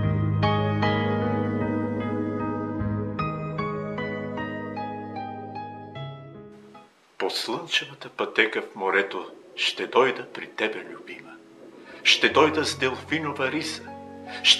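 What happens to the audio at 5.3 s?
Nothing goes wrong at 5.3 s: the audio plays through that moment intact, with no audible fault.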